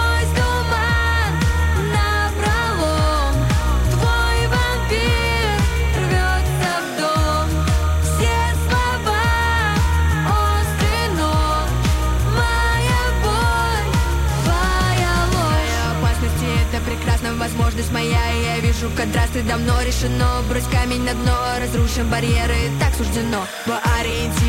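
From start to finish, timecode bleed sits behind the audio, a steady chirping warble roughly 20 dB below the main sound. Linear timecode running at 30 frames per second has leaked in from a neighbouring track or cable, its square wave flipping between tones near 1 kHz and 2 kHz. A spectrogram shows two persistent horizontal bands with harmonics above them.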